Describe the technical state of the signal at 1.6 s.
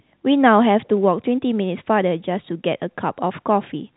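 At 1.6 s the audio is intact: the speech passes through ordinary G.711 telephone coding, so nothing above 3.9 kHz is present, with no fault at that point.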